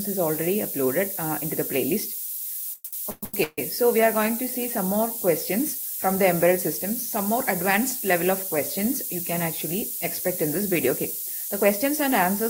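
From the first moment to the end, the audio carries low bit depth with noise shaping. The signal is coded with only about 5 bits, and the rounding error is steered upward in frequency, leaving a constant, thin hiss that climbs toward the top of the band and sits at roughly the same level as the sound itself. Unlike plain coarse quantisation, the hiss stays bright and does not turn gritty or track the signal's loudness.

Between 2.73 and 3.60 s come repeated stalls (stutter). Packets arrived late or too slowly, and the jitter buffer emptied five separate times. Each time, the receiver stretched the last sound to cover the wait, with the longest gap 143 ms and about 523 ms filled in total, so roughly 61% of that stretch is concealment. Nothing is actually lost, which is what separates this from packet-loss dropouts. The sound drags and hiccups rather than skipping ahead or falling silent.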